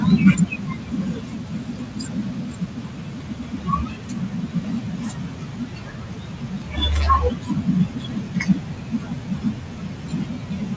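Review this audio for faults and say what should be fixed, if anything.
Speech cut by the noise suppressor runs from 0.0 to 6.79 s and again from 7.3 s to the end, affecting roughly seven seconds in the first stretch. The suppressor mistook soft speech for background and turned it down by as much as about 13 dB, so consonants and word endings sound swallowed. On a spectrogram, fricative energy below the 8 kHz ceiling of the call codec thins out abruptly. The waveform shows word tails sinking into room noise that sits about 25 dB below the speech. Reducing the suppressor's aggressiveness, or switching to a speech-aware suppression model, would keep these quiet sounds intact.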